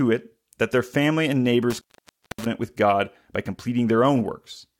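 From 1.70 to 2.46 s the speech is broken by an intermittent contact. A loose cable or plug loses connection. The signal drops out for about 0.57 s. Crackle marks the break and the reconnection. Faint hiss remains in the gap.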